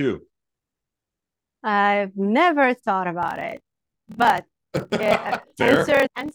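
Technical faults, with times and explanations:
3.20 to 6.35 s: block size mismatch (padded). Short blocks are padded with zeros to a larger size. This adds a 38.3 Hz buzz and slows speech to 0.889 times.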